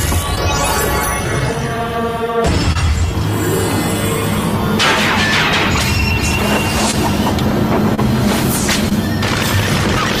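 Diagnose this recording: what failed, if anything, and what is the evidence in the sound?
Short concealed packet loss at 0.35, 2.72, 6.91, 7.95 and 8.89 s is a network-stage fault. Each time, about 20 ms of audio, which fits one 20 ms packet, arrived too late. The decoder extrapolated the preceding sound and crossfaded back, leaving brief smears or wobbles.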